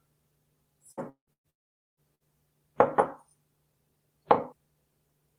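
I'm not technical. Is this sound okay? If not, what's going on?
No. Burst of packet loss at 0.91 to 1.00 s, 1.33 to 1.47 s and 2.15 to 2.23 s: brief chunks of audio, about 60 to 120 ms each, never arrived. The player filled each gap by stretching the last sound into a fading buzz or hiss, then skipped ahead.

A longer break occurs at 1.09 to 1.30 s and again at 1.50 to 2.00 s. The last sound trails off into silence, and nearly half a second vanishes in the second one. The likely cause is a long network dropout, where nothing reached the player for that stretch.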